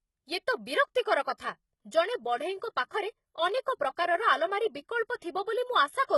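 Throughout, the treble sounds gritty and synthetic, with s sounds turning lispy and nothing above 11.8 kHz. This is likely HE-AAC compression, rebuilding the upper band from copied lower bands, which fits a bitrate near 16 kbps. From 1.37 to 1.40 s, a short hiss smears in about 27 ms before a sharp attack. That pre-echo comes from quantisation noise spread across a transform block, filling the quiet moment before the onset.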